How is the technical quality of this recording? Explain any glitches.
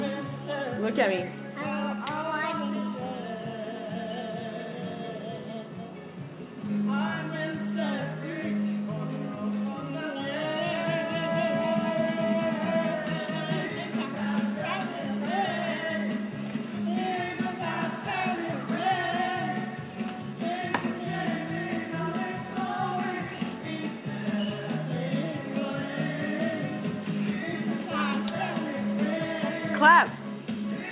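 No audible glitches or faults.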